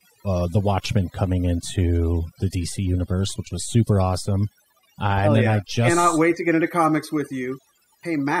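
Speech with overdone noise removal throughout: the background drops and breaks up into twinkling specks. Unlike a noise gate, individual frequency bands vanish, not the whole signal.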